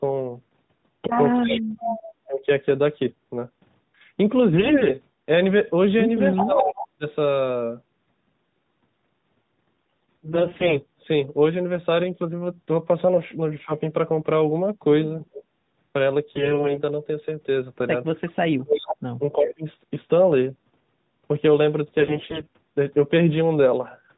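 Speech suppressed in double talk and echo leak arrive together first, from 1.38 to 2.49 s. The talker's level sinks in pieces, at worst by about 40 dB, while a copy of the sound trails 342 ms behind at about 5 dB below the speech from 1.47 to 2.12 s. Both come from a loudspeaker end whose echo canceller likely could not tell its own talker from the returning echo. It clamped down on both and still let part of the echo slip back.

AMR bit errors hit from 4.52 to 4.97 s. On a weak radio link, a sizeable share of the less protected bits in the narrowband AMR frames arrived flipped while the checksum still passed. The excitation pulses land in the wrong places and the pitch, gain and spectral details drift, so the sound keeps its rough pitch and loudness but turns hoarse, scratchy and gargly inside the 4 kHz band.

The pairing repeats from 6.34 to 7.05 s: an echo leak at the same 342 ms delay and about 5 dB down (6.34 to 6.88 s), with suppression dips of about 20 dB (6.44 to 7.05 s).

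Bit errors return from 9.77 to 10.80 s, the longest stretch of gargling.

A brief suppression dip of about 10 dB falls at 13.66 to 13.71 s.

Bit errors come back from 16.36 to 16.79 s, where the corruption is heavier and the scratchiness harsher.

From 18.44 to 19.65 s comes a double-talk cut as deep as the first, near 40 dB, with a quieter echo leak at about 10 dB down from 18.77 to 19.54 s.

Bit errors close the clip from 22.00 to 22.57 s.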